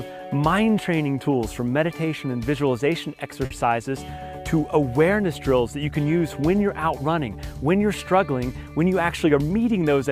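At 3.45 to 3.52 s a late packet left the jitter buffer empty. This is a short stall from a late packet: the receiver stretched the last sound by 50 ms and then resumed where it had stopped, so nothing is lost. The sound hangs briefly with a faint buzz or dip, and the playback delay grows by 50 ms.

From 9.00 to 9.58 s the jitter buffer held more audio than its target, and the receiver trimmed short pitch-period slices repeatedly to shed around 50 ms. This jitter buffer speed-up plays the sound at 106% speed without changing pitch, so the passage sounds slightly hurried.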